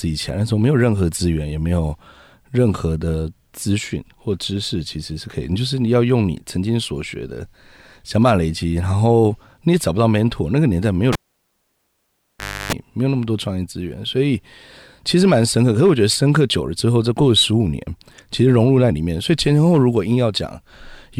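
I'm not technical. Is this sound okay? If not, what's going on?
No. At 11.13 seconds the cable is pulled and plugged in. A pop, then near silence for about 1.55 seconds. Reconnecting, the plug's tip touches first and picks up a 0.31-second buzz from the 50 Hz mains. Another pop at 12.73 seconds.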